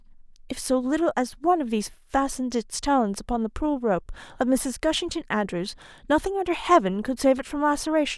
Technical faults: none

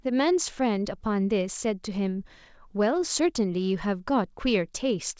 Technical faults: none

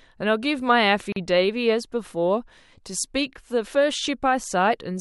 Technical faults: gap at a join of encoded pieces

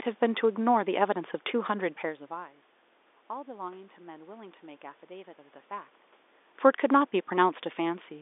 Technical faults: none

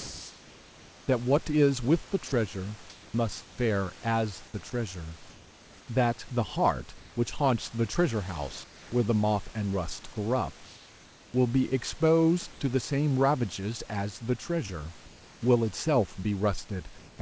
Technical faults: comfort noise in place of the background; sound dropped by the voice detector

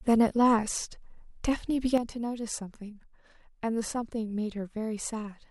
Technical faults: sudden gain jump

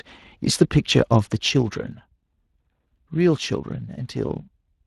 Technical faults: Speex codec; zipper noise

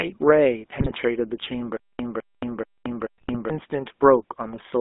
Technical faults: GSM full-rate codec; GSM bit errors; stutter with silent gaps

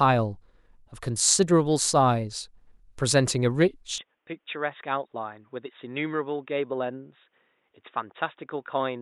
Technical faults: input switched to a poorer device

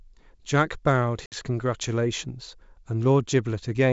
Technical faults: packet loss on an ADPCM call

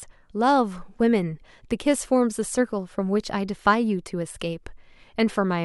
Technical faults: none

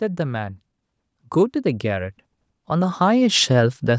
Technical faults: automatic gain rising

